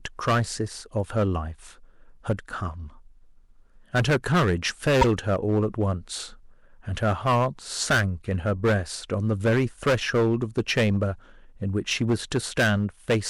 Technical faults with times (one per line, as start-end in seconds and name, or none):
0.00-13.30 hard clipping
5.01-5.05 corrupt frame decoded